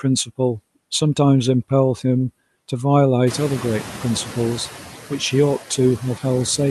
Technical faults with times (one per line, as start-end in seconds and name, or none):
0.00-6.71 noise suppressor artifacts
3.26-4.70 noise suppressor catching up